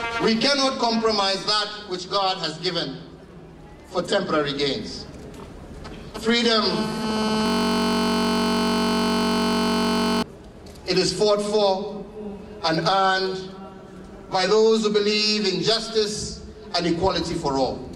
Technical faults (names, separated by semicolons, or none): system hang loop